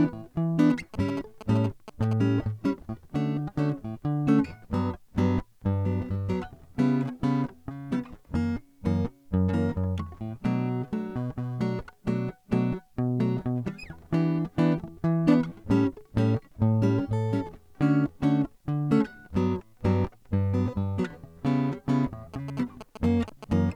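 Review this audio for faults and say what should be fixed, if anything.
GSM signalling bursts break into the music from 0.70 to 2.13 s and again from 22.34 to 23.53 s. They sound like a galloping dit-dit-dit of short buzzes at 216.7 Hz, roughly 10 dB below the music. A nearby 2G phone's radio pulses are being rectified by the audio circuitry. These come in short broken clusters, not a continuous 217 Hz drone or steady 50/60 Hz mains hum. Prevent it by keeping phones switched off or in flight mode near the recording chain.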